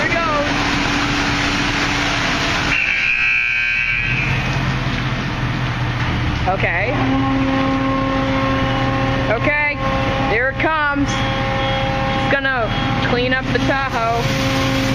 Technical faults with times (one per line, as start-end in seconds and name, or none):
none